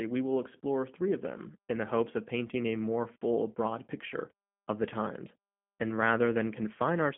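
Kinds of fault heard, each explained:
G.729 codec: The speech runs through a narrow line band of about 150 Hz to 3.4 kHz, and it sounds slightly rough and synthetic, with a buzzy, reconstructed quality, which fits an 8 kbit/s G.729A coder that rebuilds each short frame from a vocal tract filter, a pitch predictor and a few pulses. That plainly audible roughness sets it apart from simple telephone band-limiting, which would only narrow and muffle the speech without making it sound synthetic.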